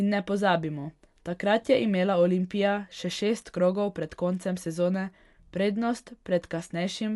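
Speech throughout sounds dull, with rough, fluttering noise around tones, likely Dolby Digital compression at roughly 64 kbps; a spectrogram shows nothing above 11.5 kHz.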